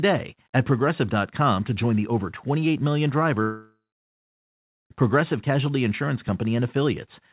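At 3.42 s the speech breaks off in what is likely a long network dropout lasting until about 4.92 s. The receiver stretches the last sound into a fading buzz for a few tenths of a second, then leaves about 1.1 s of silence before speech resumes with roughly 1.5 s missing. On the waveform this shows as a shrinking tail into a flat line. On the spectrogram, already empty above 4 kHz from the call codec, a smeared band fades to blank.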